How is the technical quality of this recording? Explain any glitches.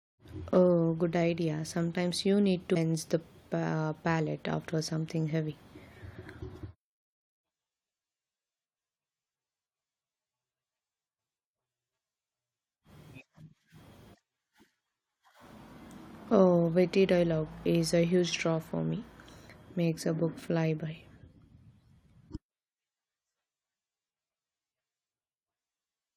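The speech carries four brief glitches caused by damaged data in a compressed stream, at 2.75 s (just after "you need"), 11.18 s, 15.29 s, and 22.35 to 22.37 s. Each is a short chirp or blip lasting at most a few hundredths of a second. Corrupted bytes make the decoder misread a frame and lose sync until it finds the next frame header.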